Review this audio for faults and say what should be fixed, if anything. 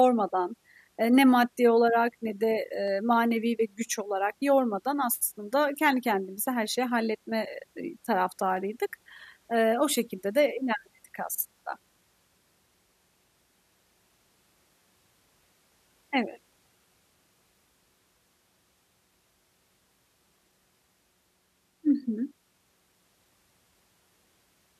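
Two sharp single clicks cut through the speech, at 2.88 s and 8.57 s. Each is likely dropped samples: a handful of samples, well under a millisecond, go missing, so the waveform jumps to a later value. Unlike a dropout, no sound is audibly lost; only a thin spectral line remains. To prevent it, give the capture and playback buffers enough headroom that the audio thread never falls behind.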